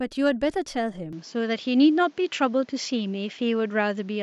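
At 1.13 s the recording most likely switched its input to a poorer device, and the speech carries that new character to the end. The switch is seamless, with no gap and roughly no change in level, but from that point nothing reaches above 7.6 kHz, so the top octave of air and sibilance is missing and the sound turns duller. A faint new background noise also enters, sitting about 35 dB below the speech.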